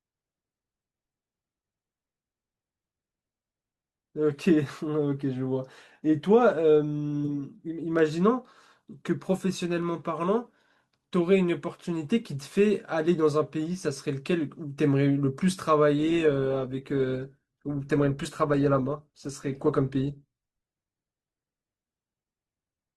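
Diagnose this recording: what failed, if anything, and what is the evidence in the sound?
The network side failed. At 15.98 s the speech suddenly picks up codec artefacts, with no gap, and stays that way to the end. That's an adaptive stream at a lower bitrate, a step down that fits Opus going from 64 to 16 kbit/s.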